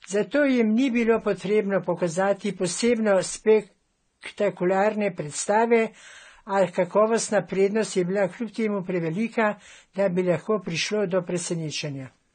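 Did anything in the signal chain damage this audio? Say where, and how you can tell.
Yes, at the codec stage: likely transcoding between lossy codecs, Vorbis then AAC-LC. Stacked artefacts from both are heard together throughout the speech, and nothing survives above 9 kHz.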